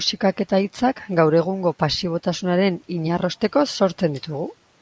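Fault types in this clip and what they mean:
No faults can be heard in this speech clip. It has passed through a call's microphone processing, which leaves nothing above 8 kHz and trims away the lowest bass, as that path is meant to.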